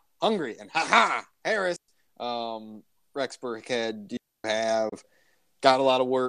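At 1.76 s the speech drops into a clean hole of near silence for about 120 ms, then comes back at 1.88 s with no crackle or hiss on either side. That's a digital wireless dropout: the radio link lost too much data, so the receiver muted with a very quick fade instead of passing garbage through. It happens again, longer this time, from 4.17 to 4.44 s, a gap of about 275 ms with the same tidy edges and no noise burst.

Shortly after that, at 4.89 s, there's a much briefer gap of about 24 ms, with the sound fading out over roughly 8 ms before it goes silent. That's a digital broadcast dropout: the receiver had a frame that was missing or failed its checksum, so it muted until good frames arrived again at 4.93 s. The length fits a single lost frame. Whatever was sent in that slice is simply gone, not smeared or repeated.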